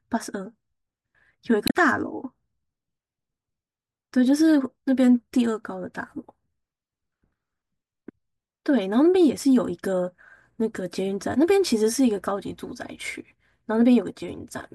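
Damaged data in the compressed stream hits at 1.65 s and lasts about 0.11 s, until 1.75 s. Corrupted bytes there make the decoder misread frames and lose sync while it hunts for the next frame header. The speech briefly breaks up before decoding resumes.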